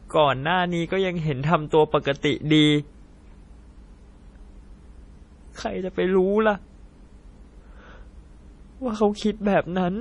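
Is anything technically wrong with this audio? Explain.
Yes. Throughout, the speech carries heavy damage that is likely MP3 compression, pointing to a low bitrate near 32 kbps. Nothing survives above 10.6 kHz. Weak detail flickers, giving a watery, swirly tone.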